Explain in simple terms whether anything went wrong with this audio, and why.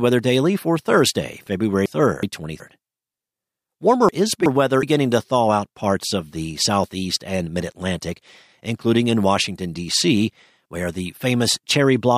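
Yes, something went wrong twice: chunks out of order. The system handles this speech in small pieces of about 0.37 seconds each, and on two occasions one piece arrived late and was played after the piece that should have followed it. Nothing is missing, but the order is swapped, so from 1.86 to 2.60 seconds and again from 4.09 to 4.83 seconds the speech sounds briefly jumbled.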